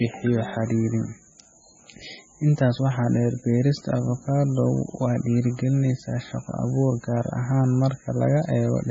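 Speech carrying heavy MP3 compression throughout: nothing sits above 7.8 kHz, and the watery, swirly sound with smeared onsets fits a very low bitrate near 16 kbps as the likely cause. A spectrogram shows a hard 7.8 kHz ceiling with flickering, patchy gaps below it.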